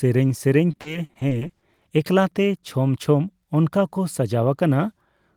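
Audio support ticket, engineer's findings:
Repeated packet loss (robotic sound), 0.71–1.87 s: choppy speech with pieces missing. Jitter buffer or concealment. 13 gaps up to 40 ms, filled by repeating prior sound; spectrogram shows smeared, stuttering harmonic blocks.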